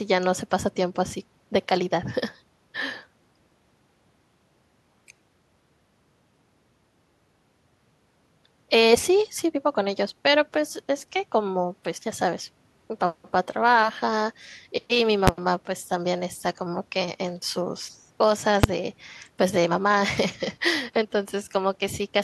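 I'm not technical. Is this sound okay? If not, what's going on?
No. The speech has two sharp bangs, at 15.28 s and 18.64 s. These are invalid numbers at full scale: a calculation broke and briefly pushed the sound to one extreme value, far beyond the speech's normal peaks.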